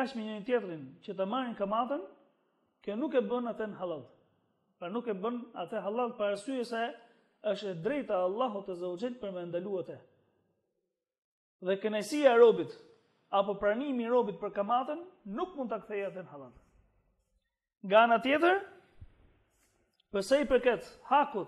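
Nothing in the sound stands out as a technical problem at any point along the way, so there's really nothing to flag here.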